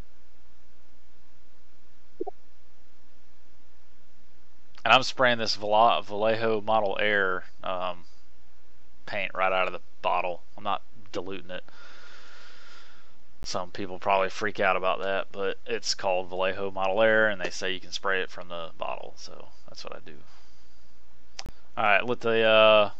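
Corrupt frames decoded at 2.20–2.29 s, 11.15–11.17 s, 13.43 s and 21.46–21.49 s: damaged compressed frames were played back as if valid, so misread codes and wrong gains put energy at the wrong frequencies. Each event lasts a few frames or fewer and is heard as a short chirp or burst of noise. The first is loudest, peaking around -20 dBFS, and the later ones are fainter.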